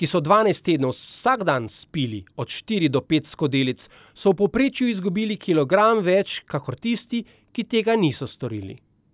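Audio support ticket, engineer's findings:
Listened to the whole speech recording and found nothing to flag, so no action needed from our side on this one.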